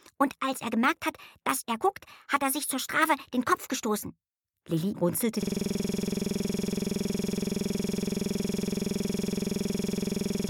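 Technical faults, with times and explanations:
5.43 s to end, system hang loop: the sound abruptly turns into a rapid, rigid rattle that repeats with no variation, a coarse buzz-like stutter at about 21.5 Hz. It continues to the end of the clip. The computer or its audio driver stopped supplying new data, so the sound hardware kept replaying the same 46.44 ms stretch of its ring buffer, which fits a 2048-sample buffer, more than a hundred times over.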